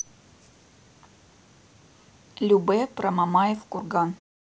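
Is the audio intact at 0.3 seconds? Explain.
Yes, the speech is intact at 0.3 seconds, with no fault at that moment.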